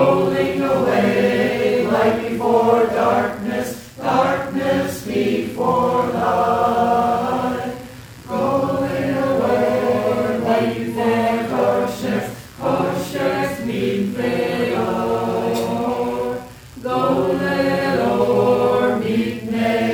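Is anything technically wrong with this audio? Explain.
Yes. Computer activity noise runs through the whole clip, a buzzy, chirping pulse train repeating about 70 times a second and sitting about 30 dB below the sound. It comes from the computer's processor, graphics or mouse load changes pushing current through the ground shared with the audio circuit. Unlike steady mains hum, its texture and intensity shift with what the computer is doing rather than holding a fixed tone, and they don't follow the sound itself.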